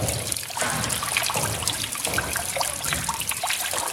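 The audio carries two short bursts from a corrupt frame decoded, at 0.88 to 0.93 s and 3.57 to 3.62 s. The second is louder, near -10 dB against about -15 dB. Their lengths point to a few damaged frames each. Flipped bits sent energy to wrong frequencies, which shows as brief vertical smears on a spectrogram.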